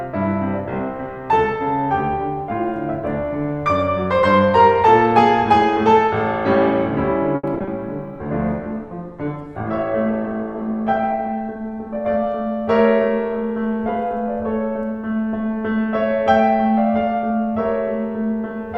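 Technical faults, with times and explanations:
7.35–7.69 s, repeated packet loss (robotic sound): the music breaks into a choppy stutter. Six short holes open in quick succession, the longest about 80 ms. The receiver patches some of them by stretching out the last stretch of sound, about 140 ms in total. Another 100 ms is simply missing. About 41% of this span is patched rather than real, so the music sounds choppy and broken.
8.19–12.06 s, call bitrate drop: the music turns rough, watery and dull. The encoder was forced to spend far fewer bits, which fits a fall from about 128 kbps to 17 kbps. Coarser coding smears the detail. The top end also closes in, from a 20 kHz band to 12 kHz, so the high frequencies fade. The low rate holds for about 3.8 s before quality returns.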